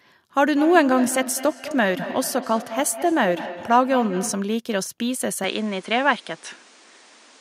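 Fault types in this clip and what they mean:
Feedback echo between two devices: From 0.51 to 4.57 s, the speech comes back as a delayed copy about a fifth of a second behind itself, peaking at about 11 dB below the direct sound. Two devices in the same room are on the call, so one device's loudspeaker plays back what the other's microphone sent, and that microphone picks it up again. Each device's echo canceller only removes its own playback, so the loop goes unchecked.
Input switched to a poorer device: From 5.44 s onward, the speech abruptly turns duller, and a faint new background noise appears roughly 30 dB below the speech. The switch has no gap, and the loudness stays about the same. The likely cause is that the system changed its input partway through, to another microphone or a headset's call profile, whose narrower band and own noise floor then carry the sound.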